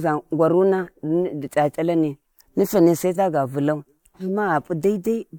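Nothing goes wrong anywhere in this bit of speech, so there's no technical fault to point out.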